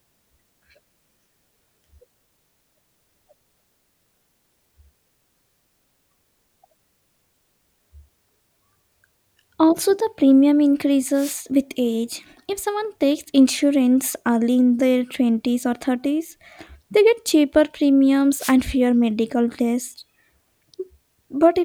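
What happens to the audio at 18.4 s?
A short swish of static from 18.38 to 18.54 s, between "they get cheaper premiums" and "fewer medical tests", is a wireless microphone noise hit: the FM radio link faded briefly, letting receiver noise through.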